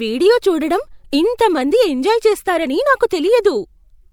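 At about 1.37 s, right after "వీడియో చూడడం" and just before "మంది ఎంజాయ్ చేస్తారని", there's a quick bit of pre-echo. The transform codec smeared its quantisation noise across the whole block, so the noise meant to hide under the loud attack leaked into the quiet gap ahead of it. You get a short hiss spread over roughly 18 ms, and the onset loses its crispness and sounds soft.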